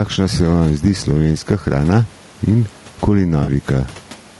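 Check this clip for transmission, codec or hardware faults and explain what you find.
Three faults are audible in this speech clip: two run throughout, and one is a brief dropout near the end.

Gain pumping runs throughout. The gain ducks by around 10 dB under each loud syllable, likely from a fast limiter pulling down excessive input gain. This is unlike steady noise, which would not move with the speech.

Low-delay AAC compression is also present throughout. The voice sounds rough and grainy, with noise filling the gaps between harmonics and a synthetic top band. This fits AAC-ELD's short frames at around 32 kbps.

AAC frame loss with concealment occurs from 3.43 to 3.49 s. The 40 ms patch is smeared and noisy as the decoder rebuilds it from the last good spectrum, which fits two lost frames. It sounds like a smeared patch rather than a click or gap, so it is not a hard dropout.

The faint room noise, about 35 dB below the speech, is part of the recording.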